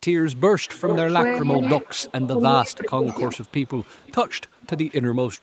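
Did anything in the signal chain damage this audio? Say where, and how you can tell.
Yes, in call processing there's an echo leak. A delayed copy about 400 ms behind comes through at 0.2–0.41, 0.61–1.14, 1.55–2.29, 3.08–4.41 and 4.6–4.93 s, likely loudspeaker pickup the echo canceller missed.

There's also speech suppressed in double talk. The voice dips at 1.41–1.62 s, then by up to about 20 dB at 2.3–3.07 s, likely the canceller ducking everything when it can't separate talker from echo.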